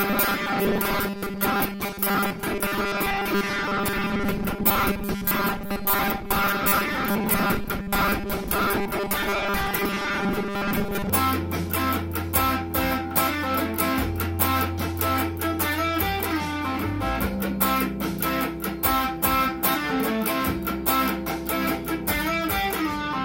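From 0.01 s to 11.1 s, new audio likely arrived too seldom, so playback kept repeating the last short buffer in place of most of the real sound. This is robotic sound from repeated short buffers, forcing a rigid, metallic 200 Hz buzz, which fits 5 ms repeats.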